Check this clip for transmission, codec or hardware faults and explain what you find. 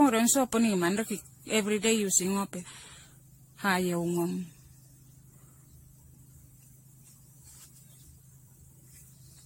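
The speech has one codec fault running through the whole clip: generation loss. It was likely caused by about seven rounds of AAC-style lossy encoding near 64 kbit/s. Each pass re-quantises the sound, so the errors pile up. The result is swirly, hollow and smeared, with blurred attacks and nothing above 16.6 kHz.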